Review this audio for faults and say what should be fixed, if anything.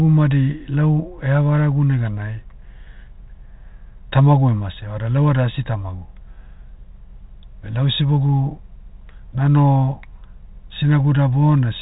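No faults; nothing needs fixing.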